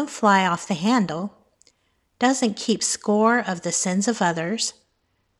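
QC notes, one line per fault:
2.23–5.40 s, Bluetooth SBC bit pool drop: from 2.23 s to the end of the speech, the treble dulls and a gritty, grainy noise rides along with the sound. The encoder was starved of bits mid-stream, which fits a bit pool falling from about 31 to 14, near 99 kbps. With so few bits, the highest sub-bands get little or nothing and the remaining bands are coarsely quantised. The rate never recovers before the clip ends.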